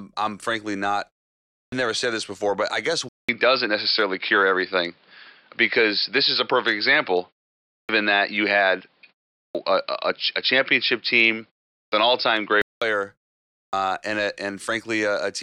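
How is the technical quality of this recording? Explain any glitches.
The recording has two audible faults: repeated clipped word onsets and a long stretch where the sound quality drops.

Clipped start after a pause occurs at 1.62, 7.78, 9.43, 11.81 and 13.63 s. After pauses of 0.38 to 0.59 s, roughly 0.1 to 0.12 s of each onset is lost as the output device wakes from sleep. Each word begins abruptly. On a waveform the first sound appears abruptly with no rise.

Input switched to a poorer device runs from 3.09 to 12.82 s and likely comes from the input changing to a lower-grade microphone or profile. A 200 ms silence marks the switch. The level shifts by about 5 dB, the sound turns dull, and a new noise floor sits around 45 dB below the signal. A spectrogram shows everything above 5.3 kHz cut off across that span.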